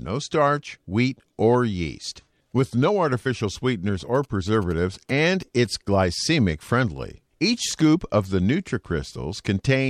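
A 2G phone close to the recording chain was signalling to its network, and the audio circuitry rectified its radio bursts, producing GSM signalling bursts in this speech clip. From 4.00 to 5.67 s, between "with no artificial sweeteners" and "glycemic friendly", a galloping dit-dit-dit of short buzzes sits roughly 25 dB under the speech. The buzz pitch is the burst repetition rate of about 217 Hz.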